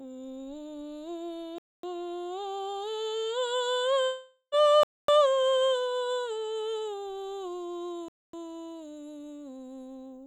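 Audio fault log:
1.58 to 8.33 s, gap between chunks: The music drops out for about 250 ms at 1.58, 4.83 and 8.08 s. The holes repeat every 3.25 s, so the stream was likely delivered in 3-second chunks with silence left at each join. Nothing is lost; it just stops and restarts.
4.04 to 4.55 s, long network dropout: Roughly half a second of the real music is missing, most likely because no audio arrived for that stretch. For about 470 ms the receiver fills the hole by stretching out the last sound it had, then there is about 60 ms of silence. The music returns further on, without the lost part.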